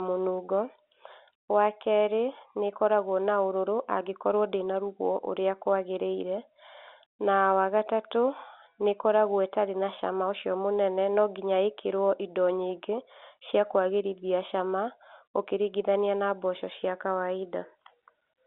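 Nothing is technically wrong with this speech recording, which comes through a standard telephone line.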